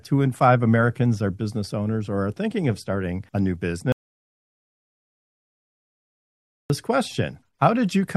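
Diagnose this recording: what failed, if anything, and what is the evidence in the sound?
The input path failed, most likely at the capture stage, where a device or link dropped out while the recorder kept writing. This is an audio dropout to silence: at 3.92 s the sound stops abruptly, mid-flow, and returns just as suddenly at 6.70 s, leaving a gap of 2.78 s. The gap holds silence with no room tone, so the waveform is a flat line and the spectrogram shows a fully black, hard-edged block across all frequencies.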